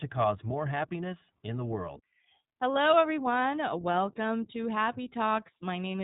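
From start to finish the speech sounds narrow, slightly rough and synthetic, with nothing above about 3.8 kHz. This is iLBC codec damage: each short frame's excitation is coded independently, and the character fits 20 ms frames at roughly 15.2 kbps.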